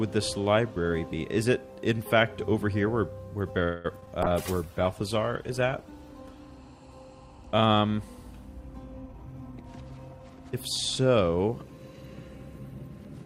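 At 3.63 s the audio stalls for about 0.23 s, to 3.86 s. The last sound is stretched into a fading buzz or hiss rather than dropping to silence. When the stream resumes it picks up where it left off, so roughly 210 ms of filler has been inserted and nothing is lost, only delayed. This is a call audio freeze, likely caused by packets held up in transit while the jitter buffer ran dry.

Just after that come two instances of short concealed packet loss, at 4.00 to 4.04 s and 4.06 to 4.09 s. In each, about 20 ms of audio failed to reach the decoder in time. The receiver bridged the gap by extrapolating the preceding sound and then cross-fading back into the real signal. The result is a brief smear or wobble at each point rather than a clean dropout.

From 4.24 s to 6.53 s there is a call bitrate drop. The encoder rate falls from 64 kbps to 18 kbps and stays at that floor for about 2.2 s. With so few bits the codec quantises coarsely and trims the upper frequencies, so the sound turns rough, watery and dull until the rate recovers.

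Between 9.06 s and 10.21 s a jitter buffer speed-up is audible. The buffer had built up more audio than its target, so the receiver repeatedly cut out short pitch-period-length segments to shrink the backlog. Roughly a fifth of a second is removed in total. Playback runs at about 118% speed with pitch unchanged, which gives this stretch a hurried feel.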